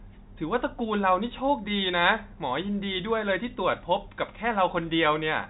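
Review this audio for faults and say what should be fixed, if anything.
Nothing needs fixing: the speech sits inside the roughly 4 kHz telephone band of G.711 coding, and no faults are present.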